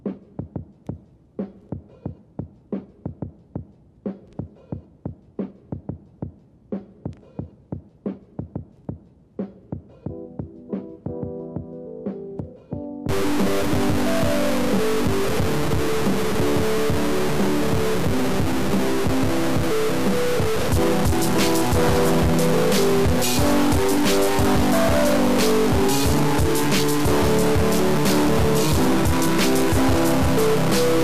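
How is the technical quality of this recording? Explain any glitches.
The recording has one fault that lasts from 13.09 s to the end. From that point a stuck bit sets in, giving distortion over the sound and a noisy hiss through the pauses. The likely cause is a data bit held permanently at 0 or 1 by a broken line or converter. About half the samples are off by that bit's weight, and small values near silence flip with sign, so gaps fill with noise. A spectrogram would show broadband grit and raised floor in the quiet stretches. The waveform would show jagged, stepped offsets.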